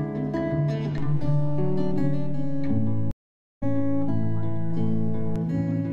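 DC step at 0.98 s: the waveform's zero line jumps to an offset, heard as a low thump, then holds until 5.36 s.

Stream reconnect at 3.11 s: the connection dropped, leaving about half a second of silence until 3.64 s, and a fresh decoder resumed roughly half a second further on.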